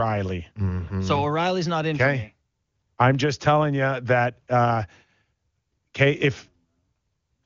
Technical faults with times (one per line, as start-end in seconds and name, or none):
none